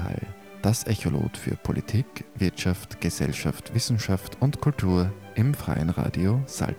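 From start to finish there's a grainy, gritty texture riding on the sound, and it gets rougher as the level drops, with the quietest bits sputtering or falling away to nothing. That's low bit depth without dither, likely a truncation down to around 8 bits with no noise added first. Because the rounding error tracks the signal instead of sitting as a steady hiss, it comes across as distortion, sitting only about 35 dB below the sound itself.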